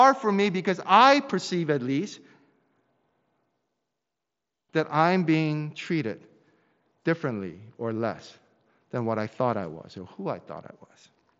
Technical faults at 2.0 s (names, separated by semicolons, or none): none